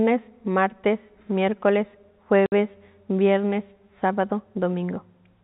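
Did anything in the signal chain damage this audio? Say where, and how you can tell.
Yes, at the network stage: packet loss filled with silence cuts a 60 ms hole at 2.46 s. Its hard edges and packet-multiple length, which fits three 20 ms packets, distinguish it from a fade or noise-filled dropout.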